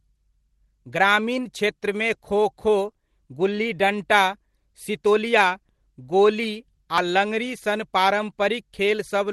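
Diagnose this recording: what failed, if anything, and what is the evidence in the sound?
Skips ahead at 5.69 s and 6.98 s, losing about 10 ms and 30 ms of speech without any silent gap, point to a likely dropped buffer (overrun) at the driver stage.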